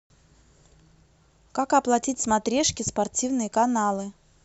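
No technical faults can be heard in this recording.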